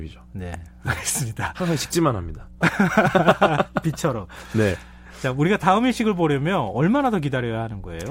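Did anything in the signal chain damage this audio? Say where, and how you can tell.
Yes: mains hum runs through the whole speech clip, a steady 60 Hz tone sitting roughly 25 dB below the speech. The damage is in the analogue wiring: a ground loop or nearby transformer coupled the power line into the signal before conversion.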